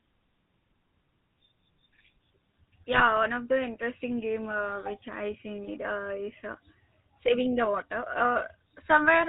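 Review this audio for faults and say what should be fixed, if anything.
The whole recording carries the GSM full-rate codec sound: a buzzy, gravelly texture that fits the original 13 kbps full-rate coder. That coder rebuilds the speech from a vocal-tract filter excited by a sparse, regularly spaced pulse train, so the fine detail of the voice is replaced by that grainy buzz, and nothing above 4 kHz survives. On a spectrogram the energy stops at a hard ceiling at 4 kHz, and the harmonics look smeared and noisy. On the waveform, the excitation shows a coarse, pulsed structure. To prevent it, capture or transmit the speech over a wideband path instead of a legacy GSM full-rate channel.

From 2.92 to 3.02 s there is a burst of GSM bit errors, heard as a short squawk and gargle. The damage fits about four codec frames and a bit error rate of around 1.5 percent. Corrupted filter, pitch or gain parameters made the decoder produce a distorted spectrum or a sudden jump in level for those frames. 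On a waveform this appears as an abrupt amplitude spike or an irregular blob about 0.1 s long. On a spectrogram it shows as a brief block of misplaced, smeared energy that doesn't follow the surrounding harmonics. To prevent it, use a cleaner radio link with stronger channel coding, or apply frame erasure and bad-frame concealment at the decoder.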